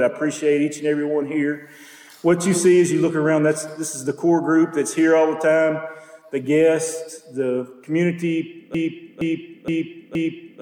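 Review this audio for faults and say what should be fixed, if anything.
There's a broken-record loop starting at 8.75 s and running right to the end of the clip. A chunk of about 0.47 s plays, then plays again, identical each time, four times back to back, so the final 1.9 s or so is just that fragment cycling. What's happening is likely a stalled player, encoder or stream that kept pushing out the last piece it had buffered, so whatever audio belonged there is simply gone. It needs a re-capture or re-export of that tail. To prevent it, watch for buffer underruns and have the pipeline output silence or flag an error on a stall instead of replaying stale data.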